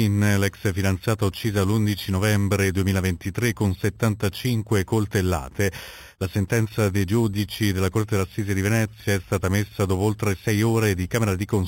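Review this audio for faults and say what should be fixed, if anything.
Imaging from sample-and-hold upsampling runs throughout: the sound seems to have been raised from 8 kHz to 44.1 kHz by repeating samples, leaving mirrored copies about 18 dB down, the first spanning 4 to 8 kHz. Unlike steady hiss, this metallic fizz tracks the sound's level and moves opposite to its pitch. Prevent it by upsampling through a proper interpolating low-pass filter rather than sample repetition.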